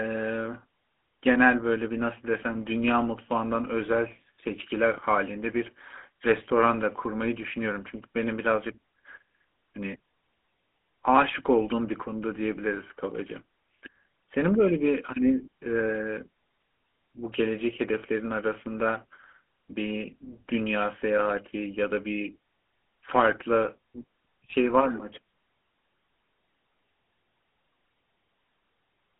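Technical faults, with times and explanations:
Throughout, GSM full-rate codec: the speech has passed through a vocal-tract model driven by regularly spaced pulses, which fits a 13 kbps GSM full-rate link. It is band-limited to roughly 200 Hz to 3.4 kHz, giving plainly audible buzzy, gravelly roughness.
5.0 to 5.1 s, phantom power thump: a supply switched on or off on a live input sends its voltage step through the coupling capacitors. The result is a deep thump that dies away in about 34 ms, lasting roughly 0.15 s overall.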